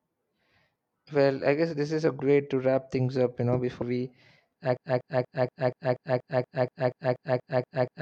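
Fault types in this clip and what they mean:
Compressed frames skipped: The decoder never played a run of whole compressed frames, because they were either missing from the stream or rejected as corrupt. The speech leaps forward by several frames of about 43 ms each, losing roughly 150 ms of audio each time. It happens twice: at 2.16–2.20 s, between "guess this is a" and "way to wrap things", and at 3.78–3.83 s just after "things up you know".
Broken-record loop: The playback or streaming chain likely stalled and kept resending the last fragment it still held. From 4.77 s a 239 ms slice of speech repeats exactly, back to back, 14 times, and continues to the end of the clip. This produces a rhythmic stutter of about four repeats per second, and whatever speech should have followed in those final seconds is lost.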